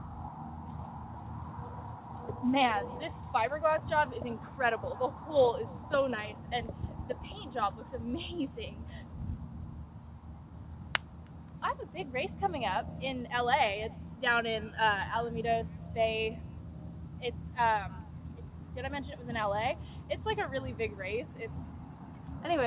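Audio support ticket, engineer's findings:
No faults found; the audio comes over a telephone-grade call path with nothing above 4 kHz, which fits G.711 A-law at 64 kbps.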